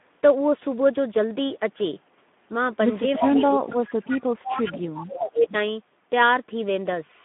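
Throughout, the speech carries plainly audible Speex codec damage: a hoarse, noisy, slightly buzzy texture from a starved CELP excitation, which fits a bitrate near 11 kbps. The line band runs only from 200 Hz to 3.5 kHz, so the sound is thin and muffled.

From 3.18 to 4.1 s the speech sinks by up to about 25 dB across roughly three quarters of a second. This is likely speech suppressed in double talk, with the echo canceller ducking this talker while the far side spoke.

Inside that dip, from 3.69 to 3.77 s, there is VoIP packet loss concealed by the speech codec. One 20 ms frame was lost, and the decoder stretched the previous frame into a brief sound that fades before recovering.

From 4.05 to 4.47 s a faint copy of the speech arrives 343 ms late, about 15 dB below the direct signal. This is likely an echo leak, where the far-end loudspeaker pickup passed its canceller and returned down the line.

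From 4.47 to 5.54 s the same ducking returns, with the speech suppressed in double talk. It drops by as much as about 25 dB over roughly a second as both sides overlap.

At 5.5 to 5.55 s a short scrap of the same echo leak slips through. It has the same 343 ms delay and sits about 15 dB down.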